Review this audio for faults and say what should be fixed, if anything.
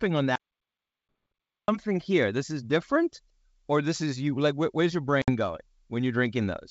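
The speech cuts out completely from 0.36 s to 1.68 s, an audio dropout to silence lasting about 1.33 s. The input was likely lost for that stretch, through a disconnected device, a broken link or an accidental mute, while the recorder kept writing silence. On a waveform this shows as a flat line with abrupt edges. A spectrogram shows a solid black band with no room tone. Monitoring input levels and securing connections and mute controls would prevent it.

Packet loss on an ADPCM call occurs twice. One lost packet at 1.08 s falls inside the dropout and can't be heard separately. At 5.22 s to 5.31 s about 60 ms disappears, which fits several consecutive lost packets. The gap has hard edges, and afterwards the decoder's adaptive predictor and step size no longer match the sender's, so the speech returns slightly distorted before settling. On a waveform this looks like a sharp-edged hole followed by a momentarily misshapen envelope. 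A spectrogram shows a vertical blank strip. Packet loss concealment and a predictor reset on recovery would prevent it.

The wideband coding sounds like G.722 at a rate consistent with 64 kbit/s, clear up to about 7 kHz with a faint hiss in the upper band.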